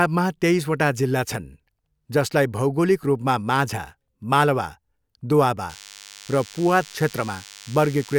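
Speech clip with DECT cordless phone buzz from 5.70 s to the end at 8.19 s: a thin, harmonic-rich 100 Hz buzz from rectified 10 ms radio bursts, about 20 dB below the speech and harsher than smoother mains hum.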